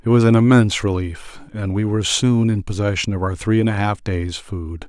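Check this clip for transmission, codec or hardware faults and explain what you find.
No faults can be heard in this speech recording. Nothing in the sound points to a problem anywhere along its path.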